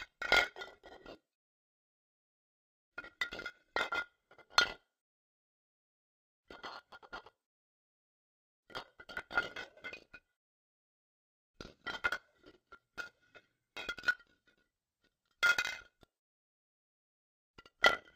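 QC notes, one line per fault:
Throughout, interleaved audio read as planar: the sound plays an octave low (-12 semitones) at the correct overall pace and is chopped by a buzz at about 38.3 Hz. Each block of roughly 26 ms holds alternating left/right samples, but the reader takes its first half as left and its second half as right. Each channel therefore replays half a block's material stretched to full length, which halves the pitch. The restart at every block boundary produces the 38.3 Hz modulation.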